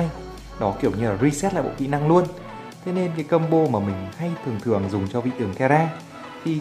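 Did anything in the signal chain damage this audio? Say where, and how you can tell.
Yes. From 4.68 s to the end, channel delay (comb filtering) appears at the stereo-to-mono summing stage: one channel lags by roughly a sample, about 0.02 ms. The cancellation notch sits around 20 kHz, so the top end dulls. A spectrogram shows the high band darkening there.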